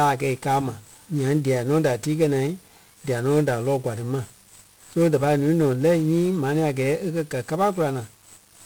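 Throughout, the speech carries 1-bit DFPWM compression: one bit per sample nudging an adaptive level, leaving dense fuzzy crackle and hiss over the treble rather than a perceptual codec's watery swirl.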